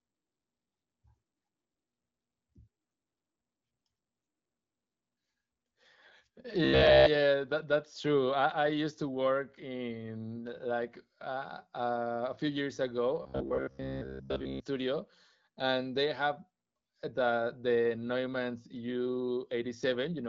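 From 6.65 to 7.06 s, just before "that that's true", and again from 13.22 to 14.62 s, right after "a few years ago", the speech collapses into robotic sound from repeated short buffers. Most of the real audio is skipped while a fragment of roughly 15 ms is looped, imposing a fixed 66.8 Hz buzz that tracks the words only loosely, which fits a likely buffer underrun. The AMR-WB coding leaves nothing above about 7.4 kHz.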